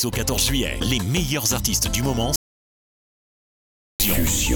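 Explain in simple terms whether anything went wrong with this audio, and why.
Something did go wrong here: an audio dropout to silence. At about 2.36 s the sound cuts off mid-flow, and for roughly 1.6 seconds, until about 4.00 s, there's nothing at all, not even the faint background hiss you'd expect from a quiet room. Then it just picks up again. The likely cause is that the input was lost for a moment, say a loose cable or a brief mute, while the recorder kept writing pure silence. Whatever happened in that gap is gone.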